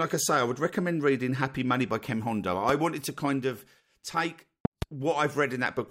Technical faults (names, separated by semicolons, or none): loud pop